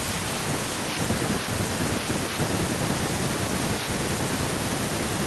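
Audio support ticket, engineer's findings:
Listened to the full speech clip and nothing stood out as a fault worth logging.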